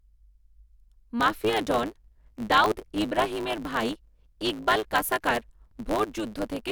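From 1.19 s to the end there's a block size mismatch (truncated): block tails get dropped, so a 109 Hz buzz appears and the speech runs about 1.09 times fast with its timbre kept.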